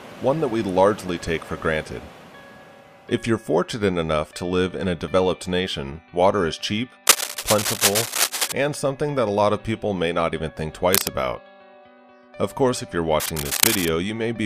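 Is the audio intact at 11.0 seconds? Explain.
No. From 10.93 to 11.09 s a burst of cable scratch noise, roughly as loud as the sound itself, rasps across it, likely from a worn connector's contact resistance fluctuating as it moved.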